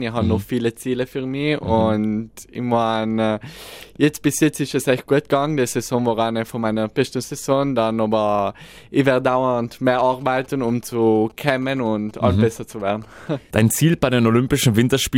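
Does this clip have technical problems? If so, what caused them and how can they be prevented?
Yes. From 10.21 to 13.29 s a galloping dit-dit-dit pattern of short buzzes at about 217 Hz sits roughly 25 dB below the main sound. These are GSM signalling bursts. A nearby 2G phone is exchanging brief groups of radio bursts with the network, and the audio wiring or preamp rectifies that radio energy into audible pulses repeating at the 217 Hz burst rate. Keeping phones away from the recording chain or in flight mode, and using shielded, well-grounded cables, prevents it.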